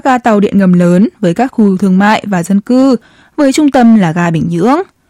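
Speech, and it's hard clipping the whole way through: the level runs about 6 dB hotter than the chain can pass, so the loudest peaks, a small few percent of samples, get squared off flat. You hear that as gritty crackle on emphasised syllables.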